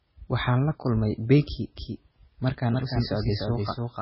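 From the first moment to the end, the speech carries heavy damage that is likely from MP3 compression at a very low bitrate, consistent with something near 16 kbps. Starved of bits, the encoder drops weaker frequency lines, so components flicker on and off between frames, giving a watery, swirling texture with smeared consonant onsets. On a spectrogram the top stops sharply at 5.6 kHz, with blank space above and speckled, patchy energy below.

At 1.77 s a second, full-band copy of the speech joins and continues through the end. This is likely a doubled audio track, with the same signal mixed in again about a third of a second late and about 5 dB quieter. It sounds like a dry, distinct echo with no reverberant tail, and it enters abruptly. In the waveform, each syllable's envelope reappears as a smaller replica shifted later in time. On a spectrogram, every speech pattern is traced a second time, fainter and offset to the right.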